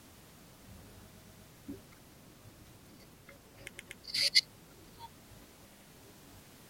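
Short stutters at 1.13 s, 3.75 s and 5.71 s replay the same slice of speech: a 120 ms block three extra times, another 120 ms block twice, then an 80 ms block twice. These are repeated frames, compressed data written more than once, together adding 760 ms.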